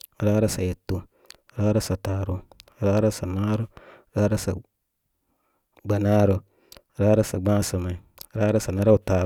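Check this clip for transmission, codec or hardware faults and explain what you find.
No transmission, codec or hardware faults can be heard anywhere in the speech: the signal stays continuous and intact throughout.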